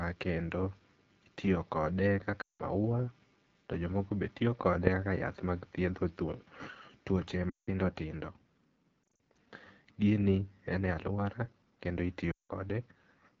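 Throughout the speech, the AMR wideband (HD Voice) codec is plainly audible. The band above about 6.4 kHz is filled with a shaped noise wash rather than real detail, and the lower band has a rough, raspy edge. That rasp fits AMR-WB at its 8.85 kbit/s mode, one of its lowest. Unlike the smeared, watery artefacts of a transform codec, the damage here sounds buzzy and vocal-tract-like.

Lost AMR speech frames break in four times. At 2.41 to 2.62 s, just after "itiyo kode", about 0.18 s of speech goes missing. The decoder repeats the last pitch and vocal tract settings with falling gain, so the sound drops to near silence within two frames. The same quick fade to near silence happens at 7.50 to 7.69 s. Between 9.04 and 9.19 s the losses are shorter and scattered, with no run longer than 40 ms, so there are only quick dips and warbles. At 12.32 to 12.52 s, after "en e aluora kendo", there is another quick fade to near silence. 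After each one the voice returns weak or rough for a moment. A plain dropout would instead cut to clean silence with no stretched tail.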